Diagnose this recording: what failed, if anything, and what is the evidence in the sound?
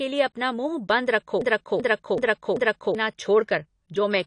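At the codec stage, the whole recording has nothing above 10.1 kHz, and the speech sounds dull and smeared with a warbling texture on sustained sounds and sibilants. This points to likely AAC compression (AAC-LC), with the encoder lowering its cut-off and coarsely quantising spectral lines at a rate that fits about 32 kbps.

From 1.41 to 2.95 s, a fragment of about 0.38 s plays four times back to back, an exact broken-record loop. The likely cause is a stalled player, encoder or stream buffer resending its last held fragment, so the audio due in that span is lost.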